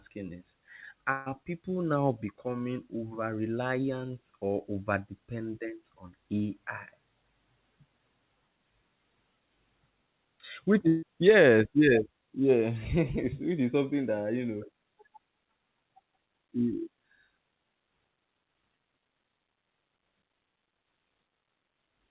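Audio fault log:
1.12–1.28 s and 10.88–11.04 s, burst of packet loss: Two short dropouts, each about 140 ms long. Several packets in a row never arrived in time. The receiver stretched the last sound into the gap and let it fade, so each gap sounds like a brief held buzz or hiss. About 140 ms of speech is then skipped. After the first gap, the audio picks up at "people now becoming over" with the part before it missing.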